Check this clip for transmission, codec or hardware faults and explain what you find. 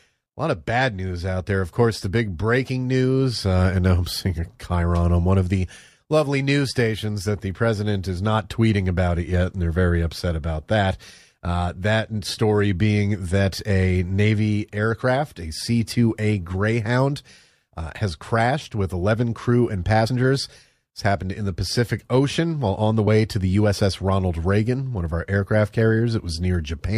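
Two codec faults stand out in the speech, both the same kind. Compressed frames skipped at 20.07 s and 23.06 s: whole frames never reach the output, so the audio jumps ahead, about 50 ms at the first point and about 30 ms at the second.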